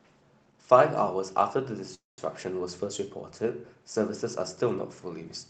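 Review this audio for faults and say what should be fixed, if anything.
A call audio freeze runs from 1.94 to 2.19 s. The last sound is stretched into a fading buzz, falls to near silence for about 0.18 s, then resumes where it stopped, about 0.24 s late, with nothing lost. The likely cause is delayed packets draining the jitter buffer. On a spectrogram it appears as smeared horizontal bands fading into a blank column, and the waveform tapers to a flat line. A deeper adaptive jitter buffer and better network priority for call traffic would prevent it.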